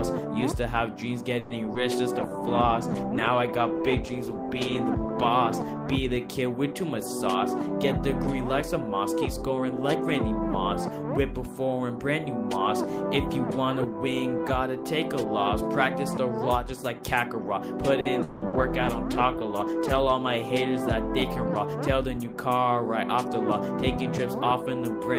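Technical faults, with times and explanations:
1.39–1.53 s, call audio freeze: the sound stalls and is stretched as a fading buzz for about 110 ms, most likely held-up packets emptying the jitter buffer, then resumes with nothing lost.
1.74–1.78 s, skip ahead: playback jumps forward, dropping roughly 70 ms of audio with almost no gap, unlike the freeze, which inserts time rather than removing it.
2.19–6.54 s and 18.50–20.63 s, call bitrate drop: the encoder falls from 32 to 18 kbps, so the sound turns coarse and dulled without any break in timing.
7.60–11.04 s and 21.74–22.32 s, jitter buffer speed-up: short pitch-period pieces are trimmed repeatedly, so the audio runs about 3% and 6% faster at unchanged pitch.
18.00–18.56 s, repeated packet loss (robotic sound): three losses in quick succession, the longest 180 ms, are patched by repeating the last sound, giving choppy audio with pieces missing.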